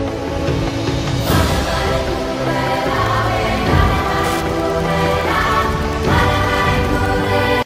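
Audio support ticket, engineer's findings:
Wi-Fi interference, 2.66–7.16 s. Wi-Fi radio close to the audio circuitry; its beacon, sent every 102.4 ms, gets picked up and rectified. Result: steady ticking at about ten per second, roughly 25 dB below the signal.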